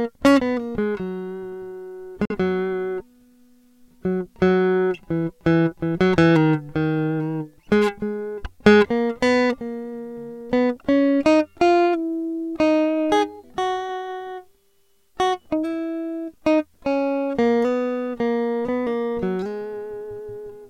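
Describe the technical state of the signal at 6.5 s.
At 6.5 s the music plays through intact, with no dropout, distortion or other fault audible at that moment.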